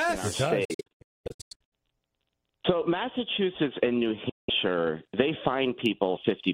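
Silent gaps scattered across 0.65 to 1.73 s, about 0.77 s lost in total, and a silent gap at 4.29 to 4.50 s, likely a Bluetooth dropout, show as blank spectrogram bands and flat waveform stretches.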